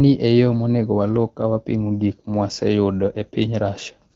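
No technical faults can be heard in this speech, which comes through the AMR wideband (HD Voice) codec at 12.65 kbit/s.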